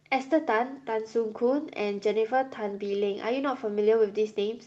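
No technical faults are audible.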